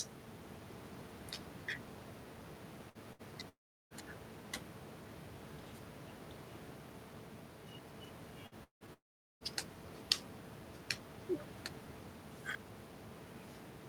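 Bursts of packet loss occur at 2.89 s, 3.13 s and 8.47 s. Each time roughly 60 ms of audio failed to arrive, and the receiver extended the last sound for about 50 to 60 ms, so each gap is a brief held buzz or fading hiss before the speech jumps ahead.

A long network dropout is likely behind three longer gaps, from 3.49 to 3.94 s, 8.64 to 8.84 s and 8.93 to 9.44 s. Each begins with a short fading tail of the last sound, followed by silence of about 350 ms, 120 ms and 410 ms. Speech then resumes with roughly 420, 180 and 480 ms missing.

At 12.51 s, chunks out of order: a 10 ms piece of audio was played about three chunks late, after material meant to follow it. Nothing is lost, but the shuffled order and three hard joins produce a quick garbled flicker.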